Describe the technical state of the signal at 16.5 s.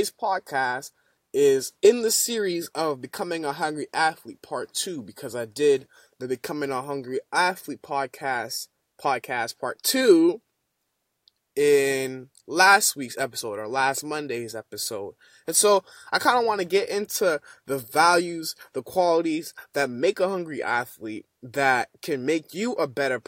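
At 16.5 s the speech signal is intact, with no dropout, clipping, glitch or other technical fault.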